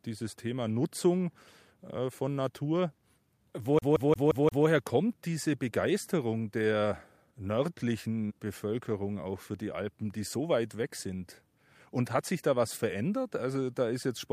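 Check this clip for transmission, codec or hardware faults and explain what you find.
One hardware fault is present: the CD stuck on one turn, from 3.79 s to 4.66 s, just before "kommt diese". A scratch keeps knocking the laser back one track at the same point on each revolution, so the player rereads the same short stretch. A 175 ms slice of speech plays five times in a row, each repeat separated by a brief mute at the jump, producing the rapid, even stutter typical of a skipping disc.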